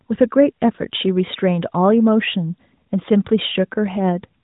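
Listening to the speech, nothing stood out as a technical fault.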